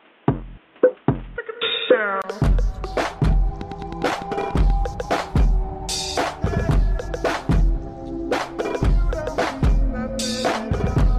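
Input switched to a poorer device, from 0.0 to 2.24 s: the opening stretch sounds dull and boxy, with nothing above 3.8 kHz and a different background hiss sitting around 35 dB under the signal. At 2.24 s a gap of about 20 ms is followed by fuller, brighter sound and a level shift of roughly 5 dB. That pattern is most likely a recording that began on a narrowband input, such as a headset call profile, before changing to a better microphone. A train of clicks runs from 3.61 to 4.71 s, with roughly ten near-identical pops at a steady 10.1 per second, peaking around 5 dB above the sound. Their regular spacing and matching shape point to likely electrical interference from nearby equipment or a faulty connection or power supply injecting pulses into the signal path.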